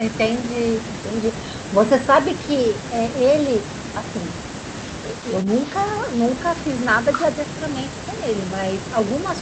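Speech, with no technical faults to report.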